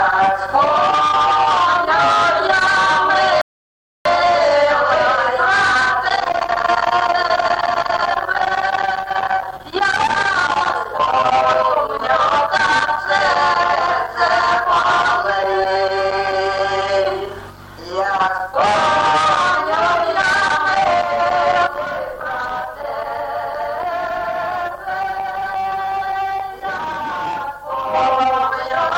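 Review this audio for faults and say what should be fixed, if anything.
Rebuffering stall from 3.41 to 4.05 s: playback ran dry, went silent for 0.64 s, then resumed exactly where it stopped, adding time without losing any audio. Prevent it with a larger playback buffer or adaptive bitrate so downloads stay ahead of playback.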